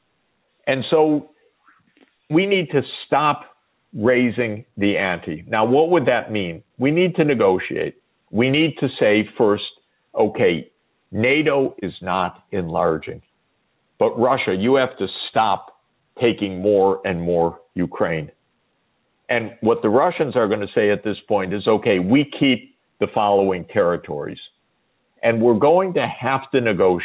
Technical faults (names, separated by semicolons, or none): gain pumping